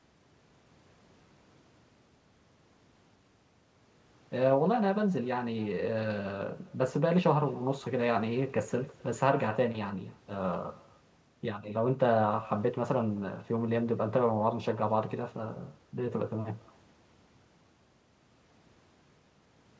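Throughout the speech, echo with no canceller trails each phrase. The far end's loudspeaker leaks into its microphone, returning a faint copy about a third of a second later, about 25 dB down.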